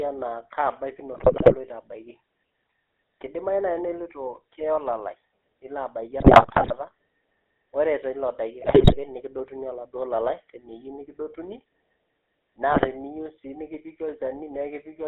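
Across the whole recording the speech carries the GSM full-rate codec: the line band runs from roughly 300 Hz to 3.5 kHz, and the buzzy, gravelly texture fits the 13 kbps full-rate mode. The codec rebuilds the vocal tract as a filter excited by a coarse, regularly spaced pulse train, so fine excitation detail is lost and every voiced stretch takes on a rasping edge. Here that damage is plainly audible rather than subtle.

GSM bit errors then break through in four bursts: 1.12 to 1.55 s, 6.2 to 6.73 s (right after "olalai nilo abaiki"), 8.6 to 8.95 s, and 12.7 to 12.87 s. Corrupted filter, pitch and gain parameters reach the decoder, so each affected frame is rebuilt with a warped spectrum or a sudden level jump. The result is squawks, pops and gargling. The longer bursts at 1.12 and 6.2 s sound like sustained chains of broken frames, and the one at 12.7 s is a short burst.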